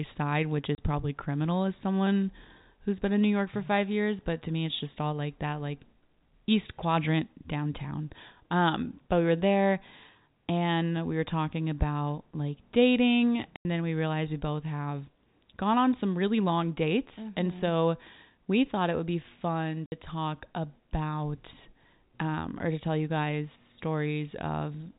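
Packet loss filled with silence at 0.75 s, 13.56 s and 19.86 s. Missing packets were replaced by dead air, leaving hard-edged holes of 30, 90 and 60 ms, which points to 30 ms packets. The holes fall before "probably criminal as someone", after "talking about like dating" and after "it would be fun".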